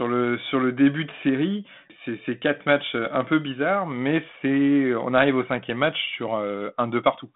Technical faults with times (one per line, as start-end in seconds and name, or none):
none